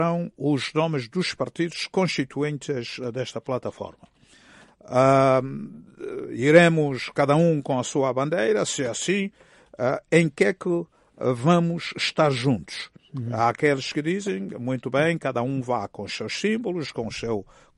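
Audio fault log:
No fault is logged for this audio.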